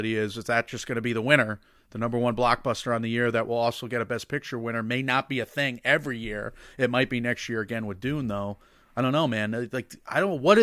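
Nothing here calls for a fix; it's a speech recording, and there's no technical fault anywhere in it.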